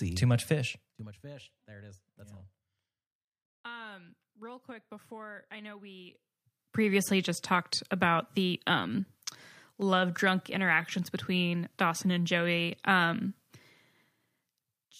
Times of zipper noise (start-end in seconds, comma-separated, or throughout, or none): 0.72-1.14